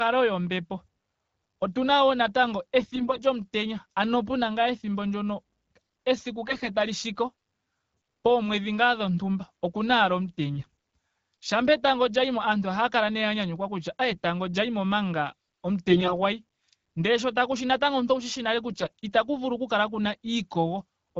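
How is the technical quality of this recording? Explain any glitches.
The speech in this recording is marred by six short bursts of AMR bit errors: 2.80–3.24 s, 6.47–6.69 s, 10.55–10.66 s, 14.11–14.18 s, 15.89–16.15 s and 18.72–18.90 s. The wideband codec carrying it sounds like HD Voice, with a band edge near 7 kHz that fits AMR-WB at around 12.65 kbit/s.

In each burst, some of the weakly protected bits in the coded frames arrived corrupted while the frames still passed their integrity check. The decoder used the damaged data, so the excitation pulses landed in the wrong positions and the fine pitch, gain and spectral envelope values were wrong. Pitch and loudness hold roughly steady, but the speech turns hoarse, scratchy and gargly. The worst bursts are at 6.47 s and 15.89 s, where a much larger share of bits seems to have flipped.

On a spectrogram, the clean harmonic striations break into smeared, noisy texture in 20 ms steps, and the formants jump around. 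The waveform envelope stays about the same, but its fine structure looks ragged.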